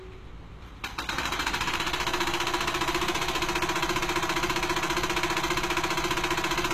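From the first moment to the end, the everyday sound carries a doubled audio track. A second full-band copy trails the original by around 150 ms at roughly 5 dB lower, with no decay or room colour. It is likely the same audio mixed in twice, either captured again through a slower path or left as two offset copies in an edit. Each event is followed by a clean, flat repeat.

Throughout the clip, plainly audible HE-AAC compression damage is also present. Nothing reaches above 14.9 kHz. The treble below that limit is not the original material. It is rebuilt by spectral band replication, which copies lower bands upward under a coarse envelope, so harmonics fail to line up across the crossover and the top end sounds gritty and metallic. The heavy damage fits a low bitrate around 20 kbps, likely in HE-AAC v2.

At 3.97 s a broken-record loop begins and runs to the end of the clip. A 0.54 s fragment repeats exactly, back to back, five times. 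Whatever should have played after 3.97 s is lost. The likely cause is a stall in the player, encoder or stream, which kept resending the last fragment it held.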